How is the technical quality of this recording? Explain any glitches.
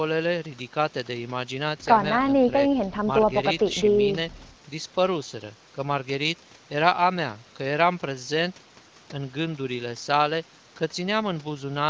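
No glitches can be heard; the speech carries the usual band-limited sound of an HD Voice call, with nothing above about 8 kHz, as expected after a call's microphone processing and AMR wideband coding at a comfortable rate.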